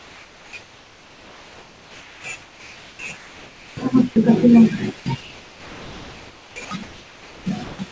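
Comfort noise in place of the background fills the pauses at 0.00 to 0.53 s, 0.62 to 2.24 s, 2.42 to 2.99 s, 3.17 to 3.77 s, 5.21 to 6.56 s, 6.83 to 7.46 s and 7.64 to 7.79 s. In each gap the background, about 26 to 31 dB below the loud passages, becomes a smooth, featureless hiss. It is about 2 to 4 dB quieter than the real background, except the last gap, which is about 3 dB louder. This is likely discontinuous transmission: the sender went silent and the receiver synthesised noise shaped like the room.

Sound dropped by the voice detector occurs at 6.65 to 6.71 s. For 60 ms the speech gives way to that same steady noise and then returns. The cause is likely the voice detector at the sender misjudging the sound as background. It stopped sending, so the receiver substituted comfort noise for the lost sound. The call path's bandwidth limit is also audible, with nothing above 8 kHz, which fits a G.722 codec.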